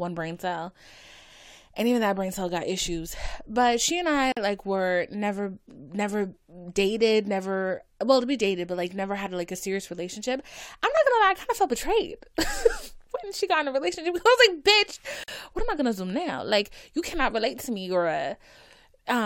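A speech clip with two gaps at joins of encoded pieces: silences of 46 ms at 4.32 to 4.37 s, between "she and I" and "like were never never", and 45 ms at 15.24 to 15.28 s. Untrimmed encoder delay and final-frame padding cause them. Unlike a dropout, nothing is lost; the speech resumes exactly where it stopped.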